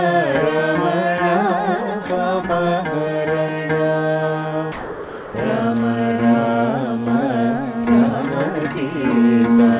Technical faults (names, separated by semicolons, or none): sound dropped by the voice detector